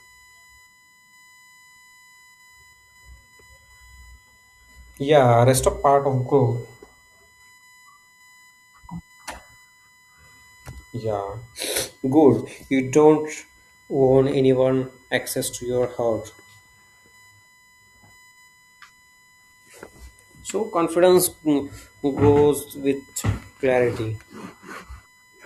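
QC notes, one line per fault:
Throughout, USB whine: current drawn by the USB bus in 1 ms frames leaks into the audio through the power or ground path, leaving a steady fixed-pitch whine at 1 kHz under the speech. Its strongest component is the 2 kHz harmonic, sitting roughly 35 dB below the signal.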